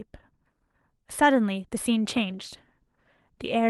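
From 2.17 s to the end, the call's bandwidth estimate falls and the Opus encoder is pushed from roughly 40 kbps down to about 18 kbps, staying at its lowest for about 1 s. This call bitrate drop makes the coding coarser, so the speech turns audibly rougher and more watery.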